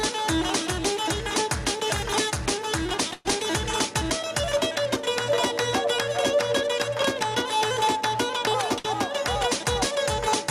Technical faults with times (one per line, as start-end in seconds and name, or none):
0.00-10.50 gain pumping
3.13-3.27 burst of packet loss
8.79-8.86 burst of packet loss